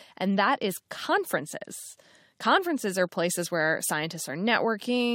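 No technical faults can be heard anywhere in the recording, and the signal holds steady from its first moment to its last.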